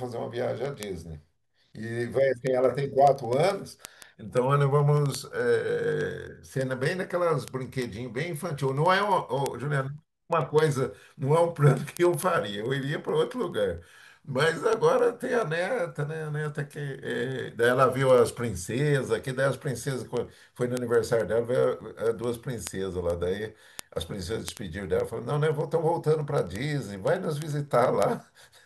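From 0.14 s to 28.63 s, the digital link feeding this speech recording is read by a receiver running on its own clock, not locked to the sender's, with the two rates apart by roughly 300 ppm. Every time the clocks slip past one another, a single sample is dropped or repeated and its neighbours misread, causing word clock ticks: sharp clicks of uneven strength recurring about every tenth of a second, some three hundred of them, forming a steady ticking under the speech.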